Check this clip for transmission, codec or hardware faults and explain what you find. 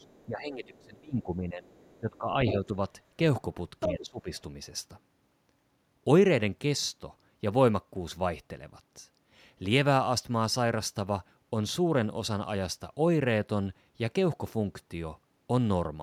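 Two related echo-cancellation faults affect the first four seconds of the speech.

Speech suppressed in double talk occurs at 0.0–0.08 s, 0.26–1.73 s, 2.0–2.75 s and 3.88–4.28 s, with dips of about 20, 20, 10 and 15 dB. Both sides were likely talking at once, and the canceller ducked the near talker along with the echo. On a waveform the envelope sags.

The other side's voice leaking through appears at 0.03–0.26 s, 1.74–2.0 s, 2.47–2.52 s and 3.81–3.95 s. It sits about 35 dB below the speech in the first two spans and rises to about 10 and 5 dB below in the last two. Residual loudspeaker echo likely escaped cancellation. On a spectrogram it shows as harmonic traces between or under the talker's.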